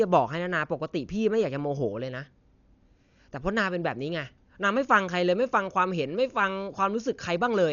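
A speech clip with heavy codec damage from start to finish: nothing is present above about 6.9 kHz, so the sound is dull and closed-in, and a rough, fluttering noise clings to the voiced sounds. This is likely Dolby Digital compression at a starved bitrate, which fits a rate near 48 kbps. The encoder narrowed the band and left many frequency lines without mantissa bits, and the decoder filled those gaps with dither noise, producing the grainy flutter.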